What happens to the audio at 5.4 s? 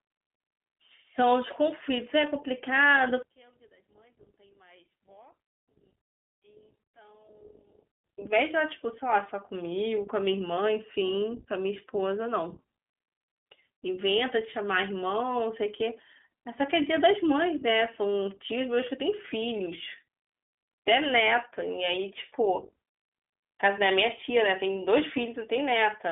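One channel inverted, from 3.23 to 8.04 s: the speech drops by about 33 dB to a faint trace, likely because one channel's reversed polarity cancels the shared content when summed to mono. Throughout, including here, the iLBC codec's independently coded 20 ms frames give plainly audible roughness and a synthetic edge, with nothing above 3.7 kHz.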